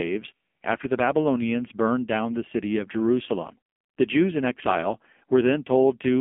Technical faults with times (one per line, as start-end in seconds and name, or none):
0.00-6.20 AMR narrowband mobile codec